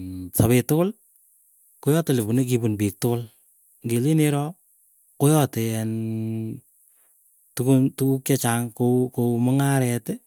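No technical faults can be heard anywhere in the recording.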